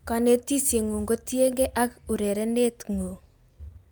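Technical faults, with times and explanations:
Nothing stood out on listening to the speech in this recording.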